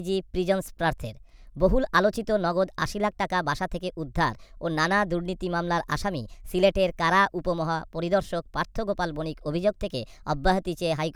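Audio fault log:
Throughout, wrong sample rate: the speech sounds hurried and squeaky, running 1.38 times too fast and pitched 5.55 semitones high. Speed and pitch rise together because the samples play unconverted at a faster rate, which fits audio recorded at 32 kHz and played at 44.1 kHz.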